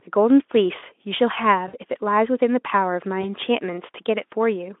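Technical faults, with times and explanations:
1.67 to 1.76 s and 3.21 to 3.33 s: VoIP packet loss concealed by the speech codec. Lost audio, about three frames then one, was extrapolated. It becomes a buzzy tone or coloured noise that fades.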